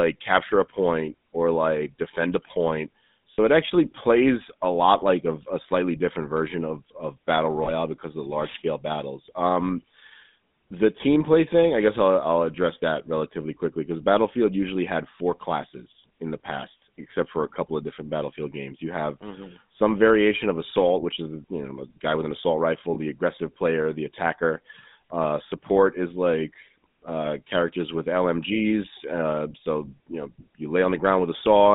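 Buzzy, gravelly roughness runs through the whole speech clip, with nothing below about 150 Hz or above 3.7 kHz. That is the GSM full-rate codec, whose pulse-driven vocal-tract model, consistent with the 13 kbps GSM coder, plainly roughens the voice inside a narrow phone band. Short rough, metallic rings appear at 3.34–3.39 s, 7.64–7.71 s and 22.94–23.16 s. These are lost GSM frames, where the decoder repeated the last good frame's settings to cover gaps of roughly one or two 20 ms frames.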